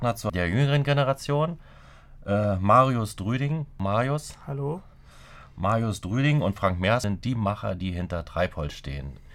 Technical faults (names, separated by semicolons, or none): damaged data in a compressed stream